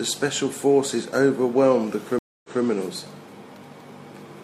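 At 2.19 s the speech cuts to silence for 253 ms, a stream reconnect. The connection dropped, the player restarted its decoder mid-stream, and playback resumes 186 ms earlier than where it stopped, so a short stretch repeats before things settle by 2.63 s.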